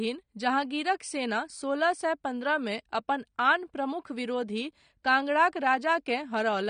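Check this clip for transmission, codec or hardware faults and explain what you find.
One fault runs through the whole recording: AAC compression, audible from start to finish. The top of the speech spectrum is cut off, and the damage is plainly audible. The likely cause is an AAC-LC encoder starved of bits, which fits a low bitrate of around 32 kbps. With that budget, the coder discards the top band and quantises the remaining spectrum coarsely, frame by frame. The result is dull, smeared speech, with a warbling, fizzy edge on sibilants and held sounds.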